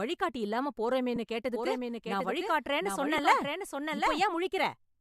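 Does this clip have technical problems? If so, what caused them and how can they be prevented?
Yes. Lost LE Audio frames: at 1.16 s and 3.18 s a single 10 ms frame went missing, and the decoder's concealment leaves a brief noisy smear in the speech. To prevent this, strengthen the Bluetooth link by shortening distance and reducing 2.4 GHz interference.

Doubled audio track: a second, slower capture path likely mixed in a copy, so from 1.54 to 4.22 s the speech repeats about 0.7 s late, a few dB quieter, starting and stopping abruptly. To prevent this, route the source through only one capture path and mute any duplicate monitoring or loopback input.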